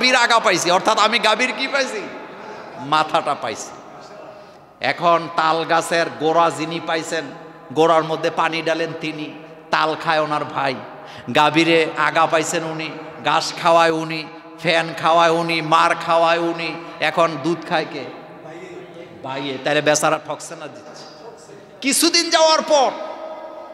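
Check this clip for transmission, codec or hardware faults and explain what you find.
There are two brief drops in level, both from the same fault. From 13.90 to 14.62 s, and again from 20.15 to 20.86 s, the sound suddenly falls by about 6 dB for roughly 0.7 s, then snaps back. The likely cause is one channel dropping out. When the mono sum loses one of its two inputs, material common to both channels halves in amplitude. Anything carried only by the lost channel vanishes for that stretch.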